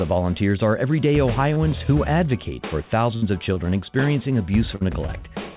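At 1.54–1.58 s a short concealed packet loss leaves about 20 ms of audio missing. The receiver extends the preceding sound and blends back in, giving a brief smear or wobble. On a spectrogram the harmonics look smoothly stretched, and the waveform shows a short, overly regular patch.

At 3.16–3.24 s a burst of packet loss drops about 60 ms. The continued sound decays into a held buzz or fading hiss, then the audio jumps ahead. This shows as a fading, blurred band with an amplitude dip.

Similar short concealments follow at 3.54–3.58 s and 5.07–5.10 s, filling about 19 ms and 13 ms.

A second burst at 4.76–4.83 s removes about 40 ms, with the same decaying fill and skip.

Throughout, nothing appears above 4 kHz, which fits the G.711 A-law call codec at 64 kbps.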